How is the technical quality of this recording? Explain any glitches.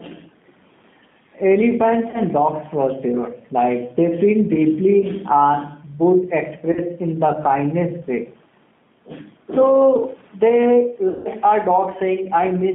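The recording's technical quality is poor, with narrowband codec damage and level pumping throughout and three short concealed dropouts.

Gain pumping runs through the whole clip. The level dips by around 5 dB whenever speech gets loud, so loud and soft passages sit close together. This is most likely a fast limiter or compressor reacting to input gain set too high. Steady room noise, about 38 dB below the speech, would not breathe like this.

G.729 codec coloration is also present throughout and is plainly audible. The sound is confined to roughly 150 Hz to 3.6 kHz, which fits an 8 kbit/s G.729A stream. Each frame is resynthesised from a vocal-tract filter and a few pulses, so the speech sounds rough and slightly synthetic. Simple band-limiting would sound muffled but not grainy like this.

VoIP packet loss concealed by the speech codec occurs three times. The first is at 2.10–2.21 s, just before "dogs for sure". 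The second is at 6.72–6.80 s, just before "in the kindness way". The third and longest is at 11.09–11.29 s. The decoder repeats its last pitch and filter at falling gain, which produces a buzzy tone or coloured noise that fades instead of silence. The first two gaps fit about 40 ms lost and the third about 160 ms, and the voice stays weak briefly after each one. A plain dropout would instead be an abrupt hole.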